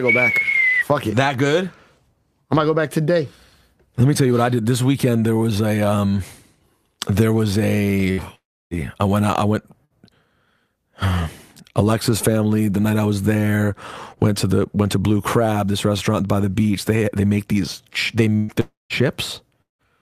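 Around 8.11 s there's a burst of packet loss: roughly 60 ms of audio goes missing, and the receiver papers over it by stretching the last sound into a short fading buzz or hiss before jumping ahead. It happens again at 9.85 s (about 60 ms) and at 18.36 s, where the gap is longer, about 120 ms, and the fill never drops to silence.

The longer holes at 8.35 to 8.74 s, 18.60 to 18.93 s and 19.62 to 19.82 s sound like a long network dropout, most likely the stream stalling outright. Each starts with that same fading fill and then goes quiet: about 310 ms of silence in the first, 180 ms in the second and 160 ms in the third. In the first two, roughly 360 ms and 300 ms of sound are lost before playback resumes further along.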